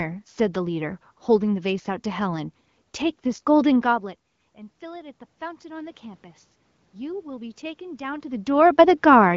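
It's a short speech recording, and the fault to notice is automatic gain rising between about 4.39 and 6.32 s. Just before that, around three and a half seconds in, the talker moves off-mic and the level at the input falls by about 19 dB. The gain control then slowly pushes its gain up by about 4 dB over nearly two seconds, so the voice and the room noise swell together rather than the voice alone coming back. The band-limited sound, with nothing above 7.5 kHz, fits an HD Voice AMR-WB link at around 15.85 kbit/s.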